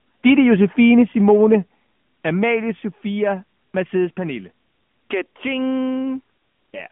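Speech runs through the AMR narrowband mobile codec for its whole length. Nothing reaches above about 3.6 kHz, and the usable band sits roughly between 150 Hz and 3.4 kHz. A plain telephone band-pass filter would only dull the sound. Here there is also a clearly audible buzzy, synthetic texture, because the voice is rebuilt from a vocal-tract model excited by sparse pulses in 20 ms frames. The degree of damage fits an upper AMR-NB mode near 10.2 kbps. From 1.28 to 1.55 s the loudest stretch picks up a harsh, crackling edge, most likely from microphone overload, with the peaks pushed about 2 dB past the converter's limit and a small fraction of samples flattened. Codec artefacts spread evenly through the whole clip, but this distortion appears only on those peaks and only in that window.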